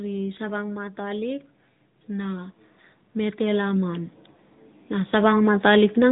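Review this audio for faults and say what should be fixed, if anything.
The AMR narrowband mobile codec colours the speech throughout. Nothing above 3.8 kHz survives, so it sounds dull and boxed in. Each 5 ms is rebuilt from a few pulses, giving a plainly buzzy, synthetic edge. This fits an upper-rate mode near 10 kbps. Record or transfer the audio through a wideband path rather than a narrowband phone link.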